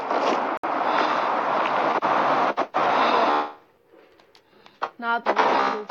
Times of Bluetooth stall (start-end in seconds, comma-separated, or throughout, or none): 0.57-0.64